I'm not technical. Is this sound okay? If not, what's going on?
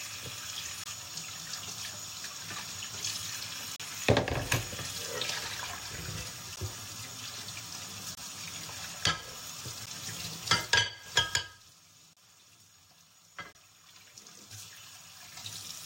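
No. The audio has seven short dropouts, each a block of digital silence: 0.84–0.86, 3.76–3.80, 6.56, 8.15–8.17, 9.86, 12.13–12.17 and 13.52–13.55 s. The sound abruptly cuts to nothing for 12 to 35 ms, and each cut is heard as a tick or tiny hole.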